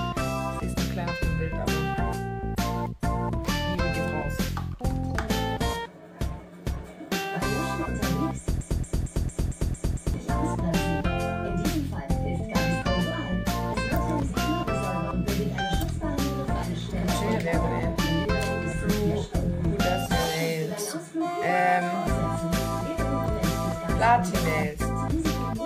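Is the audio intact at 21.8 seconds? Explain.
Yes, the audio is intact at 21.8 seconds, with no dropout, click, distortion or other fault at that point.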